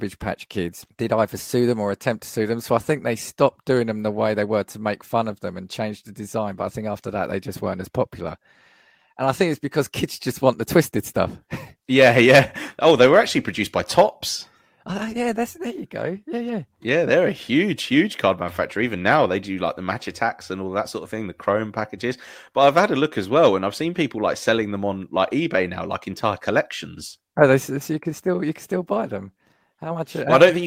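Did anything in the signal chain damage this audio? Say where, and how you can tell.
No. Nothing in the chain damaged this speech.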